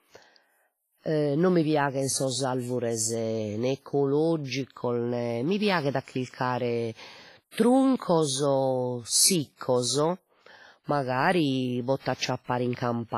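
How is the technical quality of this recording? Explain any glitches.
The speech is heavily degraded by coding damage throughout. For the whole clip the sound rings and smears, with a washy hiss that swells and fades with the speech, and nothing above 15.4 kHz. This is likely WMA compression at a low bitrate, roughly 24 kbps, where long transform blocks spread quantisation noise over tens of milliseconds and weaker spectral detail is discarded.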